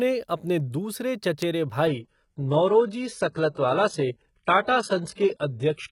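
At 1.42 s a single sharp snap sits on top of the speech, an electrical switching spike, most likely an arc from a nearby switch or motor coupling into the line. From 1.87 s to the end the audio shifts abruptly, with no gap, to an adaptive stream at a lower bitrate. Nothing remains above 11.1 kHz and codec artefacts grow, consistent with a drop from about 96 kbit/s AAC to a 12 kbit/s HE-AAC rendition.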